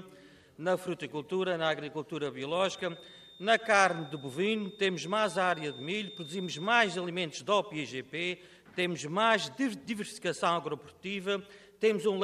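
From 2.45 s to 7.15 s a thin feedback whistle near 3.6 kHz sits roughly 20 dB beneath the sound, likely a loudspeaker-to-microphone loop hovering at the edge of howl. Unlike a fixed electrical tone, its level swells and fades slowly and never builds.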